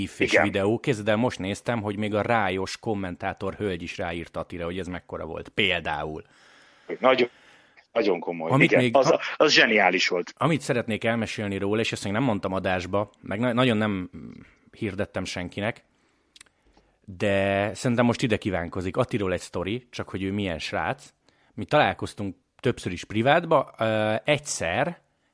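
No faults can be heard anywhere in this speech recording.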